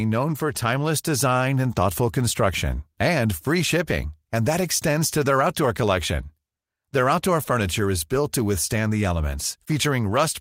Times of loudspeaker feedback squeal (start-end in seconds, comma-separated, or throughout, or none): none